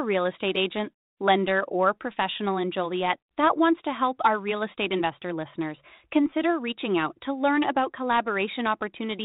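No technical faults can be heard in this speech recording.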